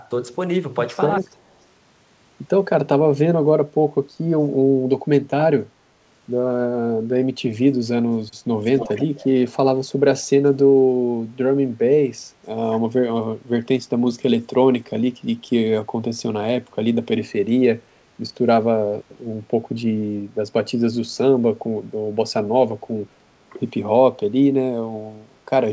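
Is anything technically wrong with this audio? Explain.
Yes. An echo leak is heard twice, at 1.2–1.28 s very faintly and at 8.65–9.26 s far more strongly, as a delayed copy of the speech trailing it by about 295 ms. The likely cause is a far-end echo canceller failing to remove its loudspeaker's pickup.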